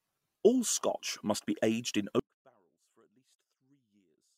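At 2.20 s the speech cuts out abruptly and never returns. This is an audio dropout to a faint residue. The signal path likely broke while the line stayed live. Only a faint sound remains, roughly 40 dB down, through the end.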